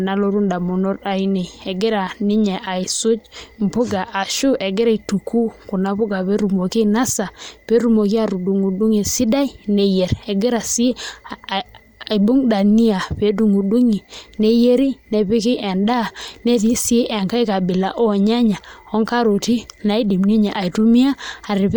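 Throughout the speech, a breathy, grainy edge sits on the upper spectrum, likely from Bluetooth LC3 compression. It fits a transform codec at around 48 kbps with 10 ms frames replacing zeroed high-band detail with noise fill. The damage is plainly audible, and nothing reaches above 20.2 kHz.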